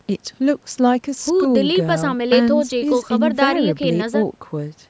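No faults are present in the speech; the only processing audible is the normal call microphone chain, whose high-pass filter trims the lowest bass and which leaves nothing above 8 kHz.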